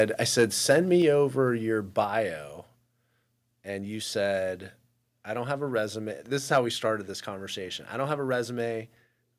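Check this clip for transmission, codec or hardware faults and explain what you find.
Two hardware-side faults are audible: repeated microphone overload, and one sudden step down in microphone volume.

Microphone overload occurs at 0.00–0.02 s, 0.38–0.44 s, 0.70–0.78 s and 6.52–6.58 s, just before "we started this conversation". Peaks run about 3 to 5 dB past the converter's limit, so a few percent of samples are flattened. This is likely an input volume set too high. It sounds like a harsh crackle on loud syllables, tied to peaks rather than random dropouts.

The microphone volume is stepped down at 1.02 s, just before "over your". Voice and background both fall by about 4 dB at once, likely because the call software reacted to the earlier clipping. Unlike a gradual fade, it is a single abrupt step.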